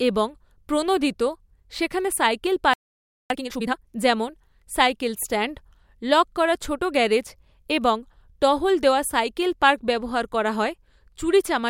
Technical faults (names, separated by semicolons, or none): playback stall; time-compressed catch-up